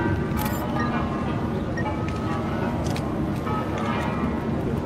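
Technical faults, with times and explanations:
No technical faults detected anywhere in the clip.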